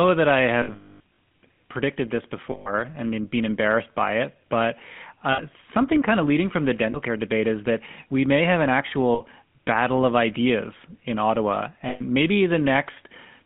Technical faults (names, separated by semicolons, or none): GSM full-rate codec; lost GSM frames